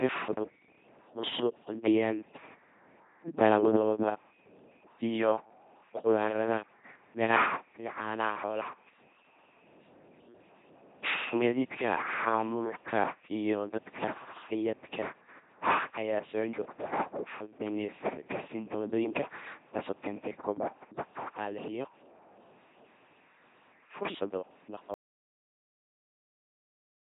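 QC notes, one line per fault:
throughout, LPC-10 vocoder: buzzy, mechanical robot voice with nothing above 3.8 kHz, the heavy damage of a 2.4 kbit/s coder forcing each moment fully voiced or unvoiced.
24.94–27.1 s, audio dropout to silence: speech cuts to silence with no room tone through to the end, likely a lost input while recording continued.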